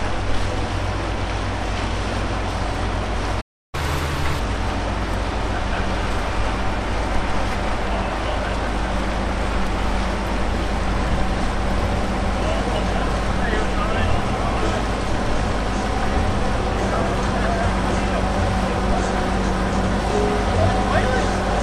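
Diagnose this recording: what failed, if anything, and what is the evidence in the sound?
Playback stall at 3.41 to 3.75 s. The sound cuts out abruptly in mid-flow and the output goes silent for about 0.32 s before resuming. This is a playback-stage fault: the player most likely starved for data or had its output thread blocked, so nothing reached the converter until the buffer refilled. The clean edges of the gap, with no noise or smearing, point to a stall rather than a wiring or codec fault.

Catch-up at higher speed from 3.75 to 4.39 s. Immediately after the gap, the audio runs fast at 1.5 times normal speed, with pitch raised by roughly seven semitones, then drops back to normal. This is the playback stage recovering the lost time. It resamples its backlog to consume it faster, and because resampling shifts speed and pitch together, the sound briefly turns higher and hurried until the timeline has caught up.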